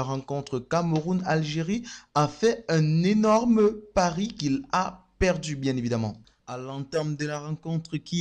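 Nothing technically wrong turns up anywhere in this audio, so there's no fault to pin to a time or trace back to a cause.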